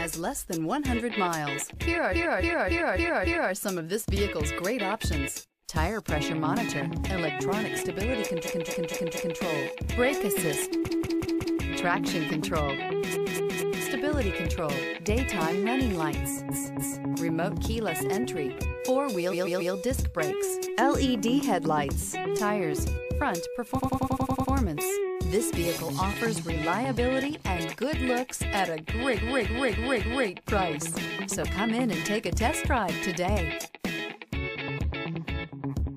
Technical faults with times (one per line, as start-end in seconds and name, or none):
2.11-3.51 repeated frames
8.43-9.36 repeated frames
10.85-11.59 repeated frames
13.12-13.82 repeated frames
16.51-17.07 repeated frames
19.30-19.72 repeated frames
23.76-24.50 repeated frames
29.14-30.26 repeated frames